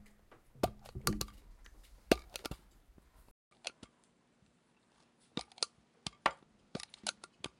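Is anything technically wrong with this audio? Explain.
Yes. From 3.31 s to the end, the sound changes character in a way that points to an input switched to a poorer device, most likely the system moving to another microphone or a headset profile. A gap of 200 ms marks the switch. After it, nothing reaches above 10.5 kHz, so the top end turns dull, the level falls by roughly 5 dB, and a new background noise appears, sitting around 35 dB below the signal.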